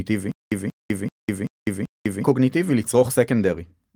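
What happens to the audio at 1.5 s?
At 1.5 s the speech is in the middle of a stutter with silent gaps that runs from 0.32 to 2.24 s. A fragment of about 182 ms plays, then roughly 202 ms of dead digital silence follows, and the same fragment comes back. This cycle repeats five times at a steady 385 ms rhythm. The likely cause is a stalled player or stream replaying its last buffered chunk on each retry, so the speech that belonged in that span never arrives.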